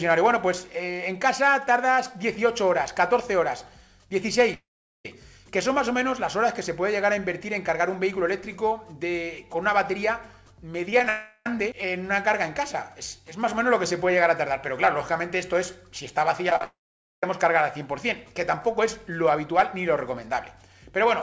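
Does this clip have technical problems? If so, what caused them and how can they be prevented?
Yes. Long network dropouts occur at 4.54 to 5.05 s, 11.09 to 11.47 s and 16.64 to 17.24 s. In each, the last sound is stretched into a fading buzz before it gives way to silence, about 0.42 s and 0.48 s long in the first and third. The lost stretch, roughly 0.4 to 0.6 s, never returns, and playback resumes past it. The likely cause is a network outage that starves the receiver of packets entirely. A more stable connection, such as wired rather than congested Wi-Fi, plus network-level redundancy, would prevent this.

Repeated packet loss gives a robotic sound at 10.91 to 11.07 s and 16.50 to 16.64 s, each run directly preceding a dropout. Four short holes in each run are patched by repeating the last sound. The first run's gaps reach 13 ms and cover about a quarter of it. The second's reach 46 ms and cover over half. 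Enabling forward error correction and a slightly deeper jitter buffer would reduce it.

The audio carries no content above 8 kHz, which fits the G.722 call codec at 64 kbps. That is a normal limit of this call path, not a fault.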